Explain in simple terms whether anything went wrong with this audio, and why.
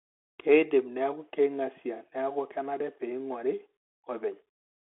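Something did go wrong: the whole recording, from start to finish, has passed through a Bluetooth CVSD headset codec, the old narrowband link used by wireless headsets. It keeps only the middle of the sound, roughly 300 Hz to 3.4 kHz, so the speech sounds thin and boxy. What sets it apart from an ordinary phone line is the damage on top: scratchy s sounds, because the codec cannot follow fast, loud changes, and a gritty, grainy hiss under the speech.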